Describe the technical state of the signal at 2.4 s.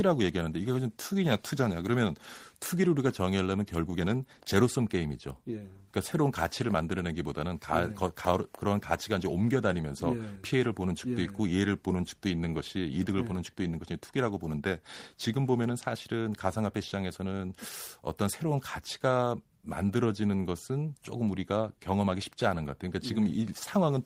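At 2.4 s the speech signal is intact, with no audible technical fault at that moment.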